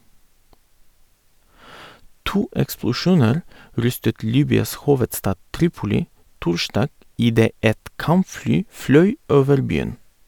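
Speech recording, no technical faults detected.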